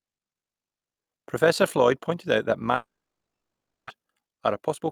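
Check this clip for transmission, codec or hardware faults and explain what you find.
Two transmission faults appear, both in the second half of the clip.

From 2.75 to 3.91 s there is a long network dropout. The last sound is stretched into a fading buzz, then about a second of silence follows, and speech resumes with roughly 0.78 s missing, likely from lost packets. A spectrogram shows a smeared tail, then an empty band.

From 3.99 to 4.82 s a jitter buffer speed-up plays speech at 110% of normal speed, trimming roughly a tenth of a second to catch up on the backlog. Pitch stays unchanged but delivery sounds hurried. Waveform cycles are cut repeatedly, while harmonic spacing holds.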